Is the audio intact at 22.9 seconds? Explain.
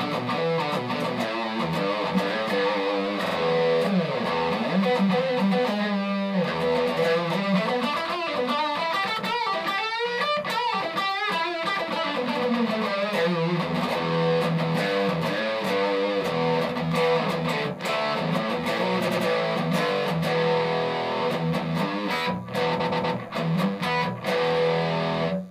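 No. From 22.79 to 23.15 s there are repeated frames: a 120 ms block, about five compressed frames' worth, plays three extra times, adding 360 ms. It sounds like a stutter. A spectrogram shows the same 120 ms pattern copied side by side.

A DECT cordless phone buzz also runs under this moment and the whole clip. A nearby handset or base sends radio bursts every 10 ms, and the audio circuit rectifies them into a faint, thin 100 Hz buzz well below the main sound. A spectrogram shows evenly spaced horizontal lines at multiples of 100 Hz, and the waveform shows small regular ticks.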